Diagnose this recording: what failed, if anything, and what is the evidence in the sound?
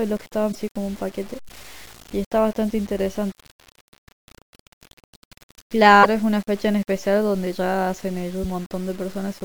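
The speech carries a gritty, grainy distortion from start to finish. It tracks the voice, sputtering in quiet tails. The error follows the signal instead of sitting as a steady hiss. The stage is sample-format conversion. The likely cause is low bit depth without dither. The grain fits truncation to about 7 bits. Values were chopped to coarse steps with no added noise. The error sits roughly 25 dB below the signal.

Five brief disturbances break the flow at 0.51–0.56 s, 1.48–1.51 s, 3.31–3.33 s, 6.02–6.06 s and 8.43–8.46 s. Each is a short chirp, noise burst or hole of 20 to 45 ms, and the audio skips ahead across it. The stage is the codec, likely a broken MP3 bit reservoir. Frames were lost. The next frame reached back for borrowed bits and decoded the wrong bytes. Each glitch is on the scale of a 26.1 ms frame.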